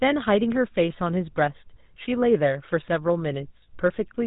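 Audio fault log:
throughout GSM full-rate codec: the speech has a plainly audible buzzy, gravelly roughness and no content above 4 kHz. The coder rebuilds the vocal tract from a sparse pulse excitation, which fits a 13 kbps stream. A plain telephone band-limit would sound dull but smooth, not rasping.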